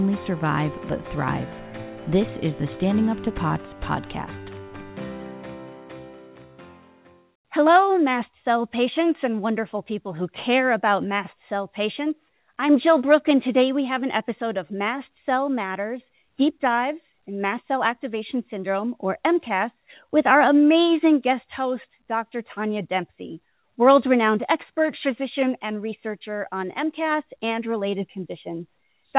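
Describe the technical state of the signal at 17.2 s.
At 17.2 s the signal is intact, with no dropout, glitch or distortion at that moment, only the call path's steady narrowband character, with nothing above 4 kHz, which fits a telephone-grade codec.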